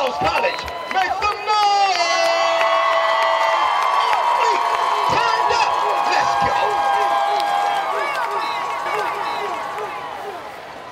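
At 8.86 s a second copy of the sound abruptly joins in, trailing about a second behind and a few decibels quieter, with no decay or room colour, and it runs to the end. This doubled audio track likely comes from a slower second capture path.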